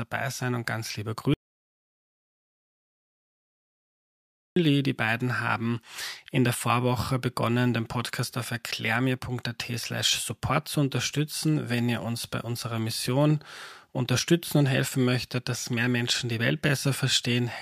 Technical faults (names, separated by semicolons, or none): audio dropout to silence